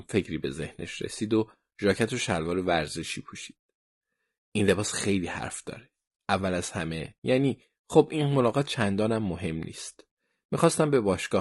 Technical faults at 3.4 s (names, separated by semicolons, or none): low-delay AAC compression